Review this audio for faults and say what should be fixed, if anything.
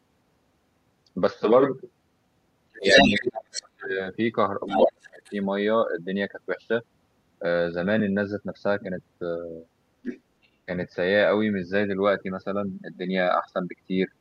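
A second voice leaks in at 2.74–3.1 s (about 5 dB above the talker), 3.54–3.69 s, 4.67–5.32 s (level with the talker), 10.03–10.21 s and faintly at 10.43–10.48 s. This is the other side's voice leaking through, likely loudspeaker echo the canceller failed to remove.

The talker's speech sinks by around 35 dB at 2.78–3.99 s and 4.67–5.33 s, overlapping the leaks. This is speech suppressed in double talk, likely the echo canceller ducking both voices at once.

To prevent both, use a headset or better-tuned echo cancellation with stronger double-talk detection.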